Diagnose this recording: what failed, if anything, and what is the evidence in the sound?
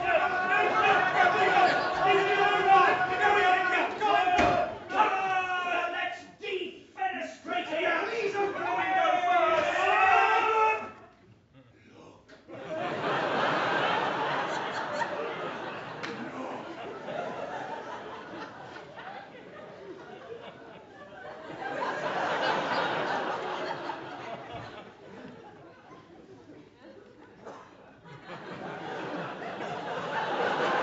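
Nothing failed: the signal has passed through call microphone processing and a WebRTC call path with an Opus-style codec, leaving a continuous band-limited signal with no content above 8 kHz.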